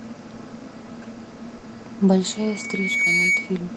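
At 1.57 s, a burst of packet loss: the last sound is stretched and faded for 60 ms, then the speech jumps ahead, skipping 60 ms, unlike a silent dropout. From 2.31 to 3.59 s, a loudspeaker feedback squeal: a single 2.2 kHz tone swells over roughly three quarters of a second until it is well above the speech. That gradual self-reinforcing growth marks an acoustic loop rather than a steady interference whine.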